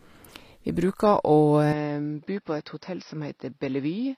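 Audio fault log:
Throughout: HE-AAC compression. Sibilants sound gritty and metallic, with treble that is bright but unnatural. This is likely HE-AAC at a low bitrate, about 24 kbps, rebuilding the top band from copied lower harmonics.
1.72–4.17 s: input switched to a poorer device. Without a gap, the sound turns duller, loses everything above 5.6 kHz, drops about 5 dB and gains faint new background noise. A likely cause is a change to a narrower-band microphone.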